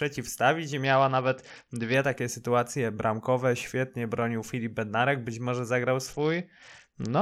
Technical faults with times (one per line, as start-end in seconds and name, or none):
0.84-1.94 Bluetooth SBC bit pool drop
6.13-7.22 Bluetooth SBC bit pool drop